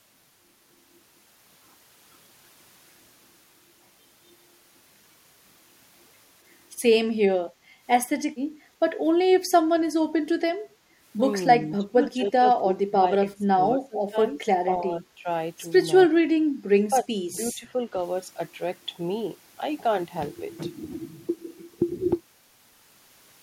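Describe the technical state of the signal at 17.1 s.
At 17.1 s the speech is pulled down sharply, by roughly 15 dB at its deepest, within a disturbance running from 16.9 to 17.17 s, with around 150 ms of that span audibly attenuated. This is speech suppressed in double talk, likely caused by both ends talking at once: the echo canceller could not tell the near talker apart from the returning loudspeaker echo, so it clamped down on everything it heard.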